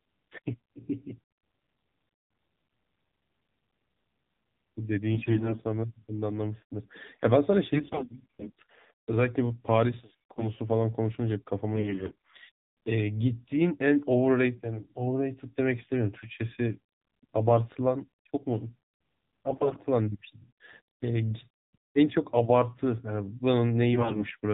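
Throughout the recording the speech carries the AMR narrowband mobile codec: nothing above 4 kHz survives, and the voice sounds buzzy and synthetic in a way that fits the low 7.4 kbps mode. A vocal-tract model driven by sparse pulses rebuilds each 20 ms frame. Unlike a plain low-pass filter, the voice itself takes on that mechanical, pulse-driven texture rather than just sounding muffled.

Against that steady coloration, short bursts of AMR bit errors appear at 5.14 to 5.61 s, 7.74 to 8.52 s, 10.12 to 10.50 s, 11.74 to 12.30 s, 19.48 to 19.81 s and 23.94 to 24.35 s. In each, the voice turns hoarse, scratchy and gargly. A sizeable share of the weakly protected bits, roughly one in ten or more, arrives flipped, so the excitation pulses and the fine gain and spectral values are wrong. Unlike dropped frames, nothing goes silent or gets smoothed over: pitch and loudness hold while the texture breaks up.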